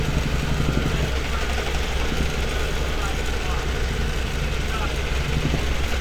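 No technical faults are audible.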